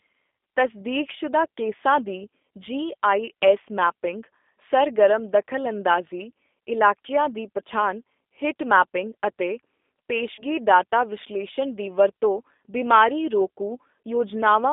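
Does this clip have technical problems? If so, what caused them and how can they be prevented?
Yes. The G.729 codec is heard throughout. It codes the speech at 8 kbit/s using a vocal tract filter, a pitch predictor and a few pulses per frame, which leaves it plainly rough and synthetic. On a spectrogram the energy sits between 250 Hz and 3.6 kHz, with nothing above and little below. Using a wideband codec such as G.722 or Opus at a higher bitrate would prevent this.

VoIP packet loss concealed by the speech codec occurs from 10.35 to 10.43 s. About 30 ms of audio went missing, which fits a single lost packet. The decoder repeated its last pitch and filter at falling gain, so the sound is briefly stretched and fades, and then takes a moment to recover. On a spectrogram this looks like smeared, flattened harmonics. The waveform shows a decaying, overly regular stretch. A jitter buffer, forward error correction or a more reliable network path would prevent it.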